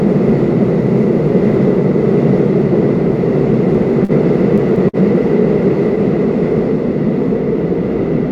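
A recording of sounds with two short stalls from a late packet, at 4.05 to 4.12 s and 4.89 to 4.96 s. Each time a packet arrived late, the jitter buffer emptied and the receiver stretched the last sound, by 40 ms in the first case and 48 ms in the second, then resumed from the same point. Nothing is lost, but each moment is held too long with a slight buzz or dip, and playback ends up trailing by the added time.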